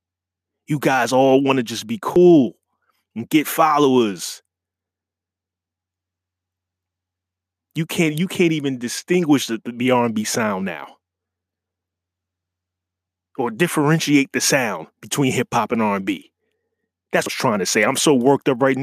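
Damaged data in a compressed stream hits twice: at 2.16 s, right after "want to just be", and again at 17.26 s. Corrupted bytes make the decoder misread a frame and lose sync, so each spot comes out as a brief blip.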